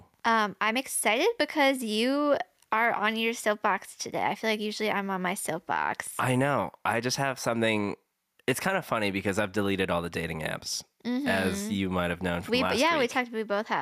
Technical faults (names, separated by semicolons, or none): gain pumping